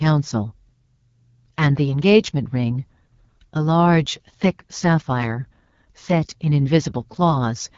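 Throughout, the speech passes through the AMR wideband (HD Voice) codec at a low rate, fitting the 8.85 kbit/s mode, leaving it plainly rough and raspy, with nothing above 7.5 kHz.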